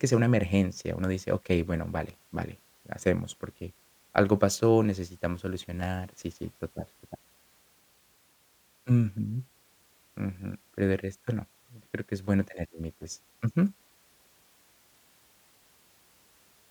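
Nothing in this speech recording stands out as a technical fault, so there's nothing to flag here.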